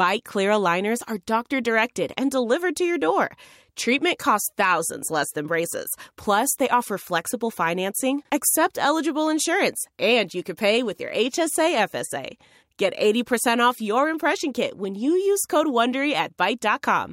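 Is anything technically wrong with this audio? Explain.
No, nothing stood out as technically wrong on listening to this speech recording.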